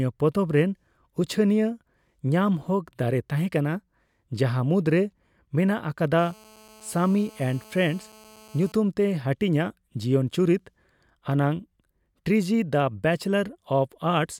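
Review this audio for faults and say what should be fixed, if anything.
A GSM phone buzz sits from 6.19 to 8.72 s: a steady, raspy 217 Hz buzz with many harmonics, about 27 dB below the speech. A nearby handset's transmit bursts are rectified by the audio circuitry. Keep mobile phones switched off near microphones and cabling.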